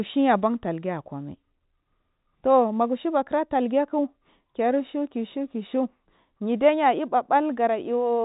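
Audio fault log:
No faults can be heard in the speech, which carries the narrow band of G.711 telephone coding with nothing above 3.8 kHz, consistent with a 64 kbps mu-law channel.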